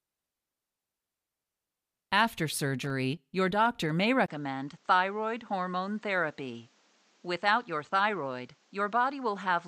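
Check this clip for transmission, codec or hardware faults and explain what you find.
Two hardware faults are audible: a short burst of contact crackle, then an abrupt change in tone and level partway through.

Loose connector crackle, 2.82 to 2.90 s. A worn or dirty contact briefly loses and regains connection, chopping the signal on and off. For roughly 85 ms this produces a ragged, scratchy burst of clicks rather than a single clean pop.

Input switched to a poorer device, from 4.26 s to the end. The sound drops out for about 20 ms, then returns duller and about 5 dB quieter, with nothing above 8.4 kHz. A new noise floor appears around 40 dB below the signal, which points most likely to the recording moving to a lesser microphone or headset input.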